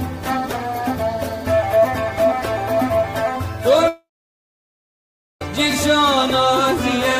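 At 3.88 s the sound decays into a brief fading buzz or hiss, then silence until 5.42 s: likely a long network dropout that lost 1.53 s.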